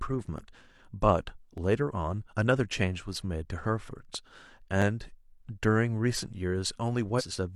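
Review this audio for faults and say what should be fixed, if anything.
Six sharp, isolated clicks cut through the speech at 0.38, 1.58, 3.16, 3.99, 4.82 and 6.19 s. Each is likely a case of dropped samples: about 0.7 ms of the stream goes missing, so the waveform leaps straight to a later value. No sound is lost, and each shows as a thin vertical line. That hard, instantaneous edge sets them apart from a frame skip. To prevent it, give the capture or playback buffer enough headroom that it never underruns.

Between 7.15 and 7.22 s, compressed frames skipped cause the speech to jump ahead by around 400 ms. This fits roughly ten missing frames of about 46 ms each, either absent from the file or rejected by the decoder as damaged. A stretch of speech disappears, unlike the single-point clicks earlier. To prevent it, transfer or store the encoded file intact and verify it, re-encoding from the source if needed.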